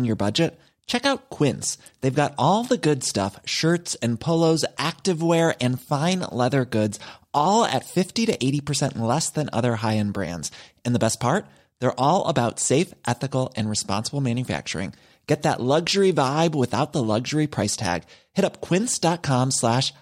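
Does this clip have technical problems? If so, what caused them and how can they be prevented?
No, the recording shows no technical faults that a listener can pick out, so there is nothing here that needs preventing.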